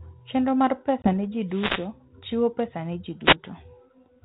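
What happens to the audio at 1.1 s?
At 1.1 s the speech is recovering from packet loss on an ADPCM call. About 20 ms, roughly one packet, drops to silence at 1.02 s. The G.726 decoder, running at 32 kbit/s, then restarts with its adaptive predictor and step size out of step with the sender's, so the sound returns slightly distorted before settling by 1.11 s. A waveform shows a flat, hard-edged gap. A spectrogram shows a blank vertical band.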